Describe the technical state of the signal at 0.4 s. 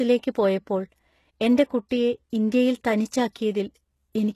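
At 0.4 s the treble sounds gritty and metallic, with nothing above 12.3 kHz. This is likely HE-AAC compression, present throughout, which fits about 16 kbps: upper bands are rebuilt from copied lower ones.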